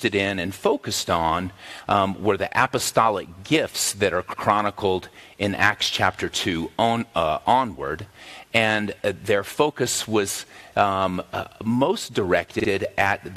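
At 4.32 s a block of about 93 ms plays twice, and at 12.59 s a shorter 46 ms block plays three times in a row. These are repeated frames: a run of compressed frames was sent again, which fits four frames the first time and two the second, so the decoder replays the same slice. Each adds about 93 ms and is heard as a stutter. On a waveform the identical segments sit side by side, and a spectrogram shows the same pattern repeated.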